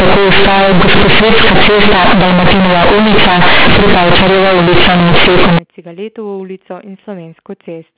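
From 0 to 5.59 s the speech is companded audio read as linear: mu-law bytes are played as plain 8-bit samples without expansion, so every sign change throws the waveform across half its range and soft passages come out as loud as peaks. The result is harsh, buzzy distortion with heavy noise filling the pauses. Unlike ordinary clipping, quiet moments get louder rather than staying clean. The narrow, telephone-like band after 5.59 s points to 8 kHz coding.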